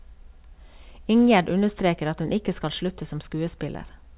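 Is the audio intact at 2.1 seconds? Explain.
Yes, the speech at 2.1 seconds is intact, with no dropout, glitch or other fault at that moment, only the narrow telephone-band sound of the call path, which carries nothing above 4 kHz.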